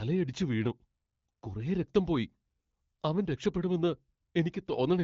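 Nothing stood out on listening to this speech clip, which comes through an AMR wideband (HD Voice) codec at 12.65 kbit/s, a rate at which that codec is working as intended.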